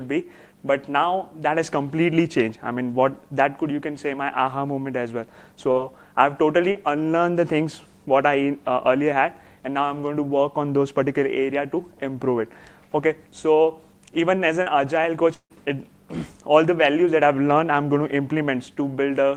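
Short concealed packet loss produces brief smears at 5.71, 6.71 and 14.63 s, each replacing about 40 ms and blending back without any silence. From 15.34 to 15.53 s the sound is stretched into a fading buzz or hiss that ends in a short silent gap, likely a long network dropout rather than another brief concealed loss.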